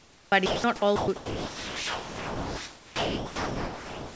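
This speech clip, carried over a G.722 call path with nothing above 8 kHz, shows a voice detector at the sender that likely switched to discontinuous transmission. From 0 to 0.32 s the receiver played comfort noise in place of the background, so the real room noise, sitting about 27 dB below the speech, is replaced by a steady, featureless hiss about 7 dB quieter. The same detector was likely slow to register the speech starting, so about 20 ms of onset clipped by the voice detector is lost at 0.30 s and the first sound begins abruptly without its soft attack. Sound dropped by the voice detector follows three times, where it likely mistook speech for background and stopped sending: 0.46 to 0.64 s, 0.96 to 1.08 s, and from 1.16 s to the end. Each time the speech gives way to flat synthetic noise, and the last gap swallows roughly 2 s of it.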